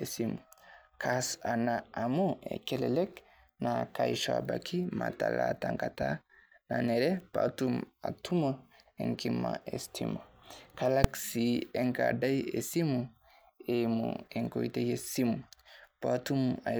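A calculation in the processing chain produced invalid or infinite numbers at 11.04 s in this speech clip, and the output was forced to full scale for one short processing block of about 2.9 ms, which fits a 128-sample block. That is invalid numbers at full scale. Because the block is so brief, the start and end jumps merge into a single hard bang with no gap between them.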